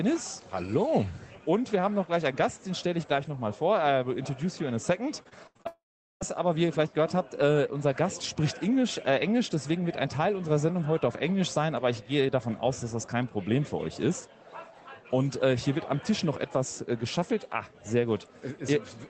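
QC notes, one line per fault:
5.23–5.67 s, repeated packet loss (robotic sound): five quick holes, longest about 78 ms, each patched by stretching the previous sound, so it turns choppy.
5.67–6.23 s, long network dropout: audio likely stopped arriving for about half a second; the patched-in buzz fades fast, then 0.4 s of silence before sound returns minus that chunk.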